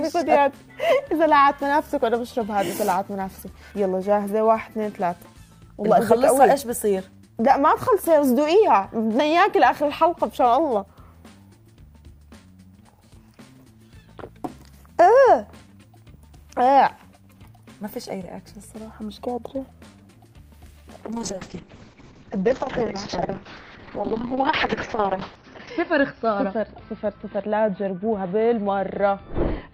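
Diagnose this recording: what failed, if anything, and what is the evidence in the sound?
What failed is a call bitrate drop, sitting between the network and the codec stage. From 21.12 s to the end, the top end collapses from a full 20 kHz band down to about 6 kHz, and the sound turns rough and watery. It sits at its worst for about 4.6 s. The bandwidth estimate fell and the encoder starved, which fits a slide from 48 kbps to around 6 kbps. Opus codes coarsely and drops the highs at that rate.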